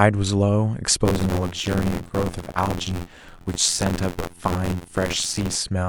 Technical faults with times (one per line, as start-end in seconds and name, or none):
1.04-5.57 buffer tearing